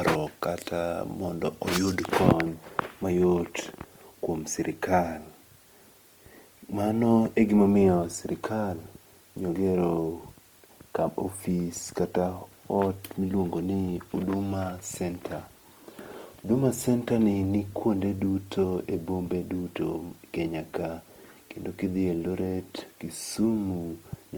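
Across the clip the speech sounds grainy and rough rather than swirly, the likely result of Opus compression in its music mode at a rate near 24 kbps. Starved bands are refilled with folded or noise content, so MP3-style watery holes are absent, and the band still reaches 20.2 kHz.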